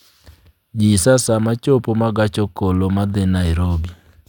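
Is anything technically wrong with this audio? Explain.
No, nothing technically wrong turns up anywhere in this speech recording.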